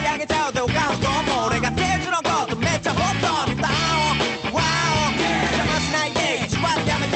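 No faults to report: the audio passes through a call path whose high end stops at about 8 kHz, which fits an Opus setting at that bandwidth, with nothing beyond the codec's ordinary coding character.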